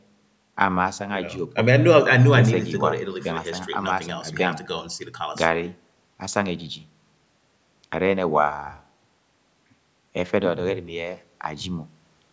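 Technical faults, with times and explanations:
No technical faults can be heard in this speech clip. It has passed through a call's microphone processing, which takes out the lowest bass and leaves nothing above 8 kHz, as that path normally does.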